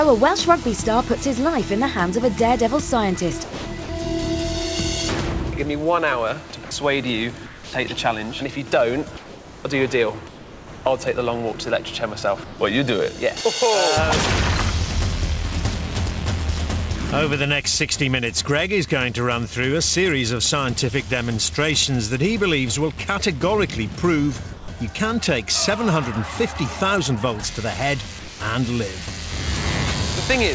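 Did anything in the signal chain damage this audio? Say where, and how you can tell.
Yes. Sound chopped by the voice detector, from 3.44 to 3.89 s: the sender's detector likely toggled transmission on and off, so parts of the sound turn into synthetic fill.

Sound dropped by the voice detector, at 6.65–6.71, 10.28–10.85, 12.44–12.59, 24.53–24.68 and 28.19–28.40 s: the detector likely mistook quiet sound for background and stopped sending, so steady noise replaces it until the sound returns.

Comfort noise in place of the background, at 7.46–7.73 and 9.17–9.65 s: discontinuous transmission in call processing likely paused sending, and the receiver's generated noise replaces the real background, featureless and about 2 to 3 dB quieter. All of this sits on a G.722 call path, where nothing above 8 kHz comes through.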